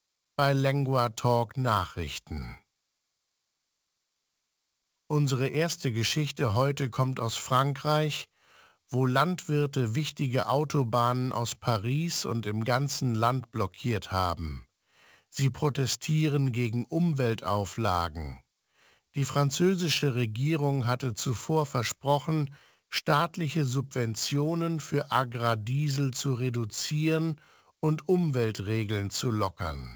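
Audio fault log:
throughout, sample clock jitter: An unsteady converter clock, several microseconds off, adds gritty hiss about 25 dB below the speech. It peaks on loud, bright sounds.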